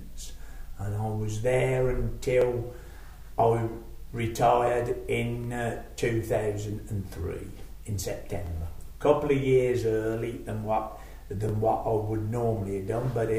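Overlapping chunks cause a brief stutter in the audio at 2.42, 5.44, 8.47 and 11.49 s. Each join replays about 25 ms of sound. The audio was cut into 3-second chunks, and each new chunk started before the previous one finished.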